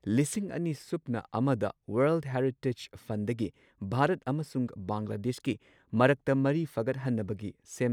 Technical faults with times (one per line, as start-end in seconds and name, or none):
none